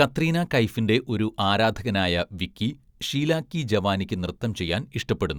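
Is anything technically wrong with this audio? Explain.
No, nothing technically wrong can be heard here.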